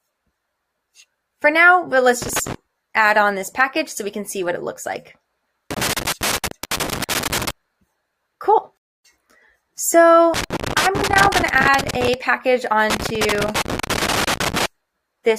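Loose connector crackle first appears from 2.22 to 2.55 s and returns from 5.71 to 7.51 s. A worn or dirty contact is intermittently opening and closing as it shifts, chopping the signal into fragments and throwing in small pops wherever the line carries a DC offset. The result is an uneven, scratchy burst of crackle over the sound.

A rebuffering stall follows at 8.77 s. Playback runs dry and falls silent for about 270 ms until 9.04 s, then picks up precisely where it broke off. No audio is lost; the gap simply stretches the timeline.

The loose connector crackle comes back twice more, from 10.34 to 12.14 s and from 12.90 to 14.66 s, with the same ragged, irregular scratching as the contact keeps making and breaking.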